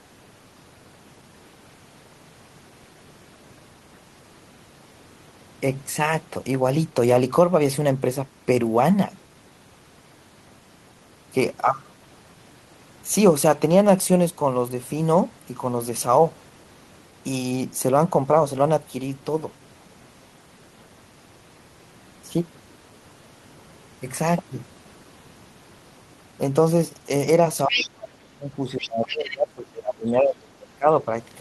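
From 27.67 to 31.08 s the talker's speech is suppressed in double talk: it dips by up to about 25 dB. The likely cause is an echo canceller that cannot separate the near talker from loudspeaker echo. On the waveform the envelope collapses.

Inside that stretch the other side's voice is leaking through, likely residual loudspeaker echo that the canceller left in the microphone signal. It appears at 27.68–27.87 s (about 5 dB below the speech) and at 28.81–28.89 and 29.06–29.36 s (about 10 dB below). It shows as separate harmonic streaks.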